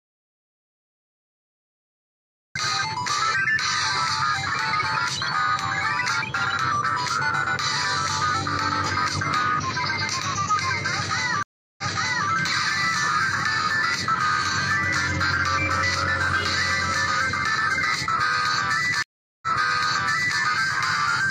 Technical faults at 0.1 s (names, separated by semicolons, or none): audio dropout to silence